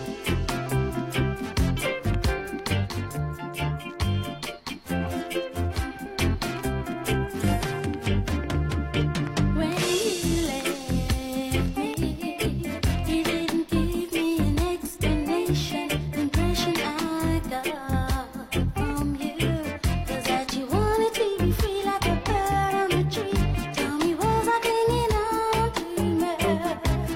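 The audio has two short bursts of damaged data in a compressed stream, at 1.77 to 1.82 s and again at 7.39 to 7.44 s. Each is heard as a brief glitch where the decoder hits corrupted frames, loses sync and skips ahead to the next valid frame header. Between 2.73 and 6.06 s, channel delay (comb filtering) makes the sound hollow and phasey. One channel runs roughly 10 ms behind the other, so the mono sum cancels at evenly spaced frequencies, starting low, somewhere around 40 Hz.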